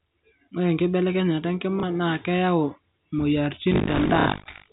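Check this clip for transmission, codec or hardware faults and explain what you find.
Two faults are present in this speech clip: packet loss with the last packet repeated, at two points, and buffer tearing through the final second. The clip is carried as G.711 A-law telephone audio, with nothing above 4 kHz and only faint coding noise.

Packet loss with the last packet repeated occurs at 1.80 to 1.83 s (30 ms) and at 4.20 to 4.26 s (60 ms). The receiver covered each gap by replaying the last audio it had. The first gap sounds like a single lost packet, the second like two in a row. Because the replayed segment doesn't line up with the pitch cycle, the first gap comes through as a small blip and the second as a short robotic stutter. On a waveform, identical blocks sit back to back with abrupt steps at the seams. A spectrogram shows a frozen, repeated spectral pattern across each gap.

Buffer tearing runs from 3.70 s to the end. 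The writing program and the hardware reader have drifted so that they cross inside every buffer period. About a third of each period therefore plays audio from roughly 70 ms earlier, with hard joins on both sides. This produces a 50 Hz rattle or buzz, which fits a 20 ms buffer period, and it is only audible while sound is present. On a spectrogram, the harmonics break into regularly spaced vertical streaks 20 ms apart. The waveform shows periodic discontinuities at the same spacing.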